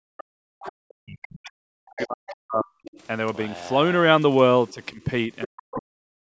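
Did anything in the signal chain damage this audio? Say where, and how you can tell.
Yes. The speech dips sharply and drops out in pieces from the start to 0.35 s, again from 0.97 to 2.67 s, and from 4.72 s to the end. At its deepest it falls by roughly 40 dB, and the losses add up to nearly three seconds. This is speech suppressed in double talk at the call-processing stage. The echo canceller likely could not tell the near talker from loudspeaker echo while both sides spoke, so it turned everything down.

A second, fainter voice, the other side's voice leaking through, sits underneath from 0.62 to 2.31 s and returns in brief scraps at 2.85 to 2.99 s and 4.68 to 4.73 s. It comes up again from 5.42 to 5.78 s. It runs about 15 to 30 dB below the main speech, loudest in that last stretch. The leak overlaps the suppressed spans, which points to the same stage. The echo canceller likely left part of the loudspeaker playback in the microphone signal.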